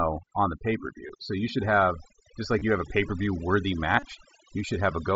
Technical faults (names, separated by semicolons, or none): overdone noise removal; concealed Bluetooth headset packet loss